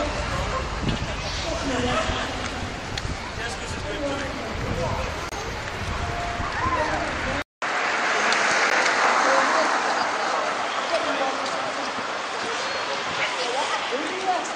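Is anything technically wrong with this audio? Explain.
Yes, a couple of things. There's a corrupt frame decoded twice: from 5.27 to 5.34 s and from 8.70 to 8.73 s, damaged frames got played anyway. The misread data throws energy into the wrong frequencies, so you hear a short chirpy blip, fairly quiet the first time and much louder the second.

From 7.42 s to the end, the input likely switched to a poorer device. There's a 200 ms dropout, then everything above 9.3 kHz is gone, so it sounds duller, with a faint new hiss underneath at roughly the same overall level.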